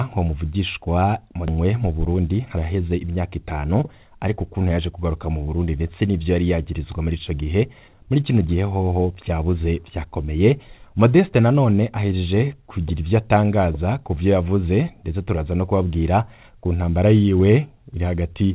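At 1.48 s the audio makes a skip ahead. Roughly a second and a half of sound is dropped. Playback jumps forward with no gap, and both sides join almost directly.

From 2.07 to 2.57 s a jitter buffer speed-up follows. The buffer sheds surplus delay by cutting short pitch-period pieces, around 70 ms in total. The audio runs about 11% faster at unchanged pitch and sounds hurried.

Throughout, nothing is heard above 4 kHz, which fits a G.711 call codec.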